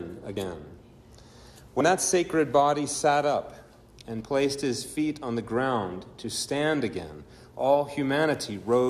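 At 1.80 s and 4.20 s, compressed frames are skipped: the audio jumps ahead roughly 70 ms and 50 ms, consistent with whole 24 ms frames.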